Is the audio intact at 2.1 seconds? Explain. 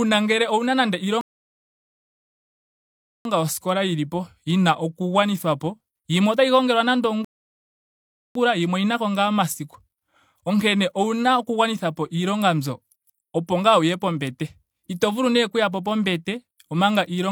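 No. At 2.1 seconds the speech sits inside a rebuffering stall that runs from 1.21 to 3.25 s. The player exhausted its downloaded audio after "ngele ouna nando" and halted until more data arrived, so the sound drops to silence for about 2.04 s. Playback then picks up exactly where it stopped, with "yoskola yilipo yina oku". No speech is lost, but the stall inserts that gap into the timeline.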